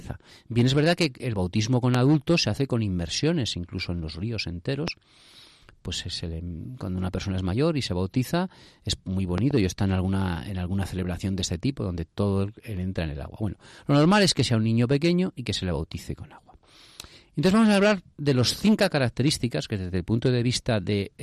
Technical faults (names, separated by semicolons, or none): loud pop